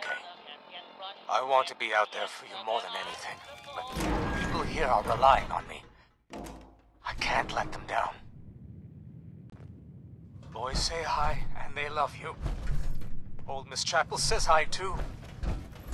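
At 9.50 to 9.54 s the audio goes silent for 23 ms, then resumes further along: likely a Bluetooth dropout, the gap fitting one lost frame.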